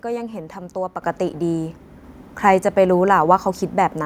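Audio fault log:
1.02 s: microphone volume stepped up. Input gain jumps about 7 dB at once, lifting speech and background together as software raised the device's input level.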